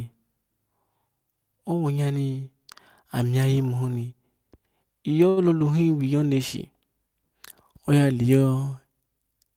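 At 5.29 to 5.40 s the speech stalls briefly: a short stall from a late packet. The jitter buffer ran dry, so the receiver stretched the last sound for about 74 ms until the packet arrived. Nothing is lost, but the held sound carries a slight buzz or dip, and playback resumes 74 ms later than before.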